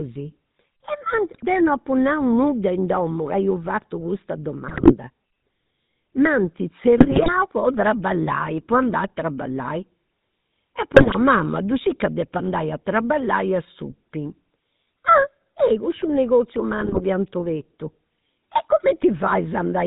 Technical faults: GSM full-rate codec; GSM bit errors

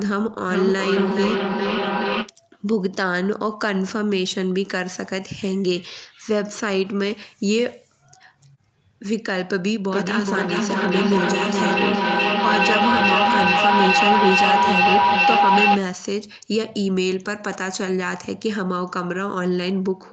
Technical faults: feedback echo between two devices; feedback howl

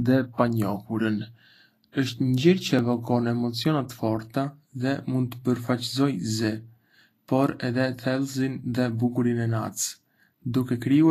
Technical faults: Vorbis compression; clock drift buffer slips

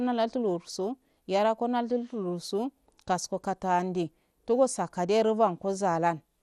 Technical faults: MP2 compression

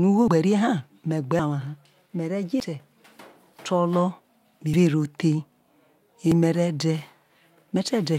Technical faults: dropped buffer (overrun)

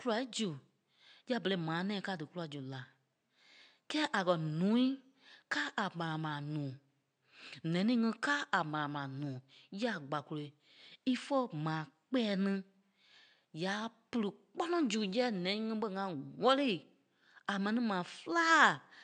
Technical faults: none

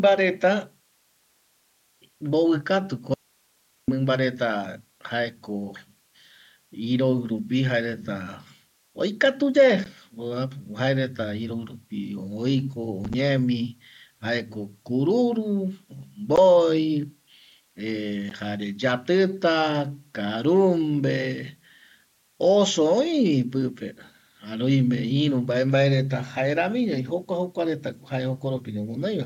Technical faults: audio dropout to a faint residue; unconcealed Bluetooth headset packet loss

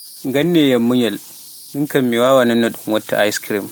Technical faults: converter idle tones; lost packet rebuilt from error correction

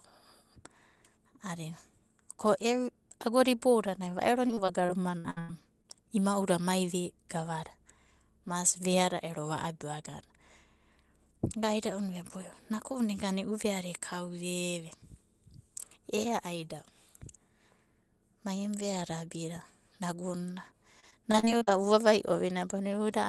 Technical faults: repeated packet loss (robotic sound)

